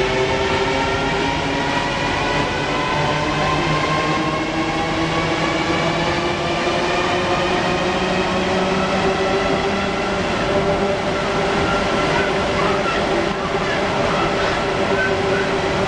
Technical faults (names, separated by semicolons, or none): none